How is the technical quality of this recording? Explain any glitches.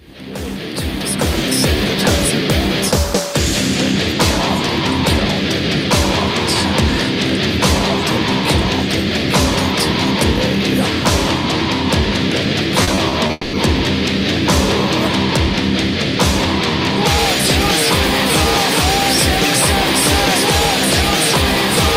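Two network glitches occur back to back near the 13-second mark.

From 12.83 to 13.31 s, repeated packet loss (robotic sound) appears: four short holes, the longest 40 ms, each patched by extending the previous sound, giving a choppy texture.

From 13.31 to 13.55 s, a long network dropout is the likely cause of a 220 ms stretch where the last sound is stretched into a fading buzz or hiss rather than silence.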